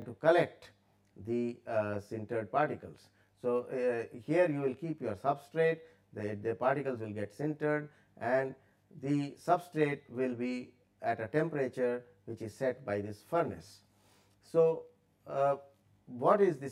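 One channel runs roughly 20 ms behind the other for the whole clip, and the two are summed to mono, producing channel delay (comb filtering). Shared content cancels at evenly spaced frequencies starting around 30 Hz, so the audio sounds rough or slightly doubled throughout.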